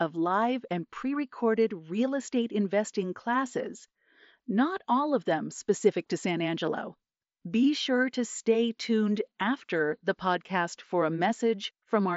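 No technical faults can be heard in this speech.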